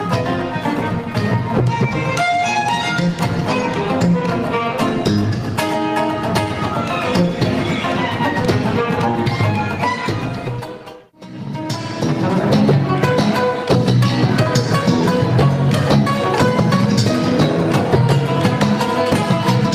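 No dropouts, clipping, distortion, noise bursts, timing glitches or other technical faults can be heard anywhere in the clip.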